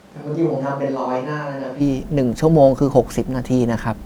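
From the start to 1.79 s the speech sounds roomy and hollow, about 10 dB quieter with more room noise, likely a switch to a distant microphone, ending abruptly.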